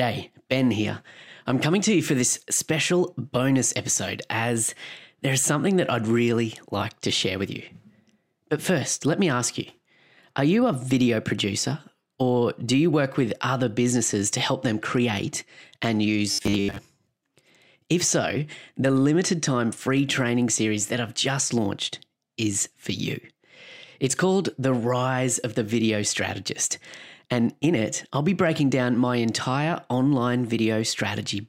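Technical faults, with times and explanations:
16.3 to 16.8 s, robotic sound from repeated short buffers: just after "help them create and", the speech collapses into a rigid, metallic buzz at 100 Hz that still roughly tracks the syllables. The likely cause is audio arriving too slowly, so a segment of about 10 ms is replayed over and over, replacing roughly 70% of the real signal. A spectrogram shows flat, evenly spaced harmonic lines every 100 Hz, and the waveform shows identical 10 ms cycles repeating.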